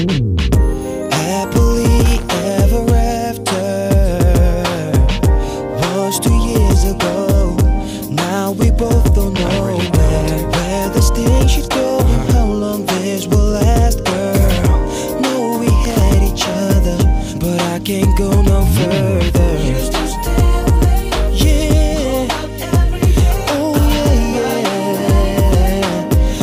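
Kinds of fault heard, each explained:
Loose connector crackle: a worn or dirty contact briefly making and breaking, chopping the signal into an irregular scratchy burst, here from 2.05 to 2.27 s and 15.84 to 16.01 s. Unlike steady record-surface crackle, it comes in short isolated bursts with clean sound between.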